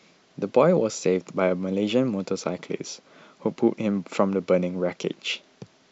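Nothing in the speech stood out as a technical problem on listening.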